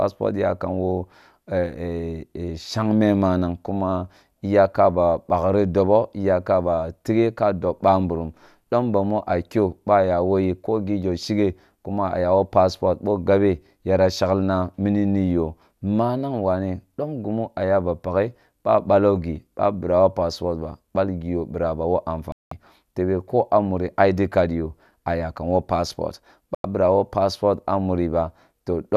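Around 22.32 s the speech drops out for about 0.2 s, then again at 26.55 s for roughly 0.1 s: a digital broadcast dropout, where the receiver lost good frames and muted until clean ones returned. The gap lengths fit whole 24 ms frames going missing.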